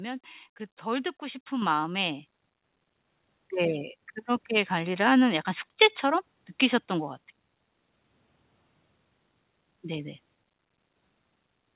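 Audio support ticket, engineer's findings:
Microphone volume stepped up, twice. Level jumps by about 6 dB at 1.62 s, then about 5 dB at 2.64 s, voice and room noise together. Probable component: the call app's auto gain control bumping the device input level in discrete steps when it judged the mic too quiet. Nothing above 4 kHz throughout, which fits a narrowband G.711-style call path. Worth pinning the mic level or disabling the app's auto-adjust.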